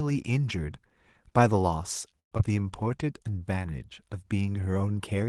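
A speech clip. From 2.19 to 2.41 s there is a long network dropout, likely from lost packets. The last sound is stretched into a fading buzz, then goes silent before the speech resumes with a piece missing. From 2.83 to 3.39 s a jitter buffer slow-down plays the speech at about 91% speed, with the same pitch. Repeated pitch periods add roughly 55 ms as the receiver rebuilds its reserve. The audio carries Opus call coding, band-limited near 12 kHz.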